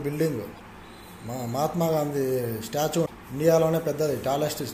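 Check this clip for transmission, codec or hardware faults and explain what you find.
Two short faults of the same kind turn up. Damaged data in a compressed stream, at 0.51 to 0.61 s and 3.02 to 3.11 s: corrupted bytes make the decoder misread frames and hunt for sync, leaving a brief chirp or blip.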